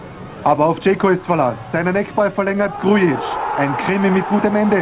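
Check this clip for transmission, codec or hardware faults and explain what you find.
One transmission fault is present, carried over a call path whose G.711 mu-law coding leaves nothing above 4 kHz. From 2.06 to 3.09 s come scattered short gaps: about seven lost or late packets, each briefly patched by extending the preceding sound, the longest around 10 ms, adding roughly 24 ms overall. They sound like isolated ticks and smears, unlike one sustained dropout or steady codec roughness.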